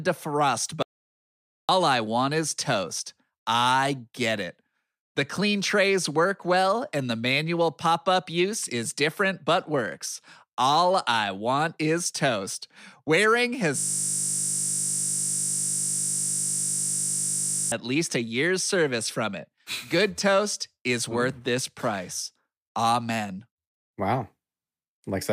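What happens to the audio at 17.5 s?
At 17.5 s the speech is caught in a system hang loop that runs from 13.78 s to 17.72 s. The driver stalled while the sound hardware kept replaying the same 20 ms stretch of its ring buffer, nearly 200 times in a row. Because the loop is so short, it sounds like a steady 50 Hz buzz rather than a stutter. Packet-loss concealment smears or fades a repeated fragment, but here each cycle is an identical copy, so the buzz stays rigid until the audio abruptly resumes.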